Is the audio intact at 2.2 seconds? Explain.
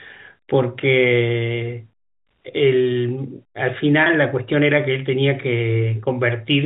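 Yes, the audio is intact at 2.2 seconds; the speech there comes through with the ordinary 4 kHz ceiling of G.711 telephone coding and no fault.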